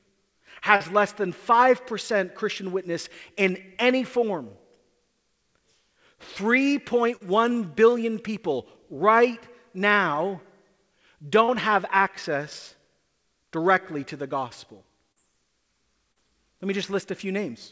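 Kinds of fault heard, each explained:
Short concealed packet loss: a few times, about 40 ms of the call didn't arrive in time, so the receiver papered over the gap by stretching the last bit of sound forward and easing back into the real audio. It comes through as a quick smear or wobble at 0.76, 7.16, 11.44, 15.12 and 16.12 s, for instance just before "less than" and just after "directly to the gospel", on a call path that stops at 8 kHz.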